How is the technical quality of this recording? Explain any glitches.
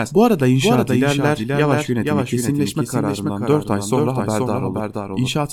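The main problem is a doubled audio track that runs through the whole clip. A second full-band copy of the speech trails the original by about half a second, only about 5 dB quieter. It has no decay or room colour, so it sounds like a flat, dry repeat rather than reverb. That likely comes from the signal being captured twice, once through a slower path, or from an edit that left two misaligned copies stacked.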